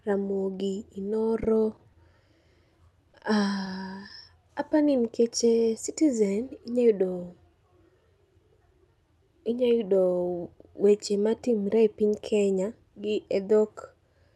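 At 1.76 to 1.80 s there is a short stall from a late packet. The jitter buffer ran dry, so the receiver held the last 20 ms of speech until the packet arrived, then resumed with nothing lost. The effect is a briefly stretched sound with a faint buzz.

From 3.11 to 4.11 s, just before "apani nikeche", come scattered short gaps: about four separate losses, each around 20 ms. Concealment extends the preceding speech into each hole, roughly 70 ms in all, and in the clip's band-limited call-codec sound, cut off near 12 kHz, these are heard as small ticks and hiccups.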